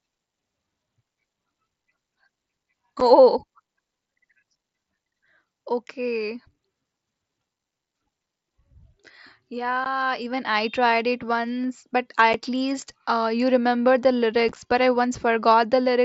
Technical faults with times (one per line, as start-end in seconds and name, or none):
3.00 unconcealed Bluetooth headset packet loss
9.84 unconcealed Bluetooth headset packet loss
12.33 unconcealed Bluetooth headset packet loss
14.49-14.56 unconcealed Bluetooth headset packet loss